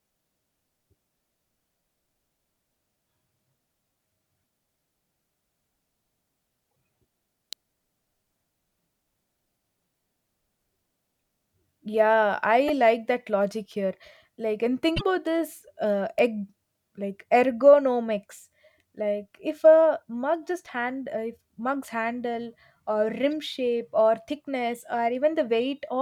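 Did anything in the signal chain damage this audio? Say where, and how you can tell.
Yes, in two places. The first is the codec/storage stage, with damaged data in the compressed stream. Short disruptions land at 6.68 to 6.70 s, 12.68 to 12.70 s, 14.93 to 15.01 s (just before "about this uh egg") and 23.26 to 23.29 s (just before "shape or"). Each lasts tens of milliseconds and replaces the sound rather than sitting on top of it. That points to a decoder misreading bad frames and resyncing at the next header.

The second is the analogue wiring, with an electrical switching spike. Sharp clicks occur at 7.53 s and at 16.19 s, between "about this uh" and "egg like ergonomics like". Each lasts about a millisecond, far shorter than the codec disruptions, with no tonal colour and no break in the surrounding sound. It is simply added on top. That is most consistent with a nearby switch or static discharge arcing and being picked up on the line, likely rather than any digital fault.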